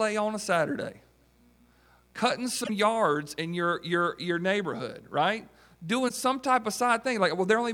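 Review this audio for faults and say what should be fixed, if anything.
Damaged data in a compressed stream shows up twice in this speech, at 2.60–2.70 s and 6.05–6.11 s. Corrupted bytes made the decoder misread those frames and lose sync until it found a valid frame header, so each spot comes out as a short chirp, squawk, click or hole. On a spectrogram each appears as an abrupt break, and the waveform shows a sudden discontinuity. Re-encode from the original source and verify file checksums to prevent this.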